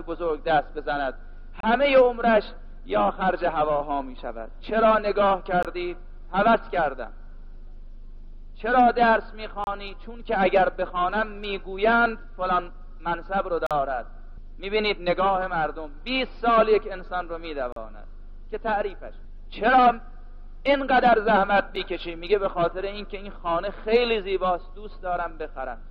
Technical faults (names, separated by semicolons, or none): gap between stream segments